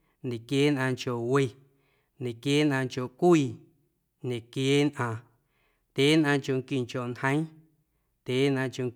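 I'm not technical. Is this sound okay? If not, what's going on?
Yes, this sound is okay.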